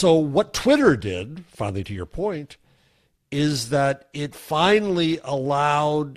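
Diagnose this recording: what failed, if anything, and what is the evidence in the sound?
Nothing failed here as far as I can hear: the speech comes across with no dropouts, clicks, level jumps or other trouble at any stage of the chain.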